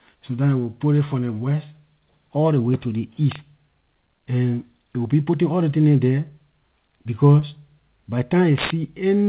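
Just after "ley way to ley", at 3.31 to 3.36 s, there's an integer overflow: a peak pushed about 1 dB past the limit wraps to the opposite sign, giving a harsh crack. A worse one hits at 8.58 to 8.70 s, about 6 dB over, so it cracks longer and more violently. At 7.40 to 7.44 s you get a short concealed packet loss: a gap of about 20 ms was patched by extending the preceding audio, which comes across as a quick smear before the real signal resumes. Everything sits under 4 kHz, which fits a G.711 mu-law call path.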